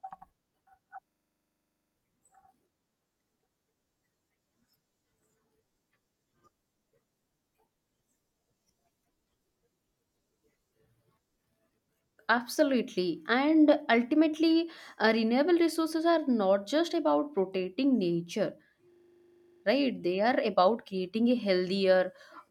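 From 1.08 to 1.96 s, and again from 18.92 to 19.64 s right after "just about protecting nature", a system hang loop occurs. Playback froze while the hardware kept replaying one 40 ms buffer, producing a rattling 25 Hz stutter. The waveform shows identical repeated blocks, and the spectrogram shows regular vertical stripes.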